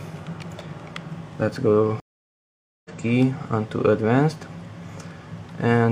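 At 2.00 s a stream reconnect silences the audio for 0.85 s, until 2.90 s. The connection broke and a fresh decoder started mid-stream. Unlike a simple dropout, playback resumes roughly half a second further on, skipping material, and fades in.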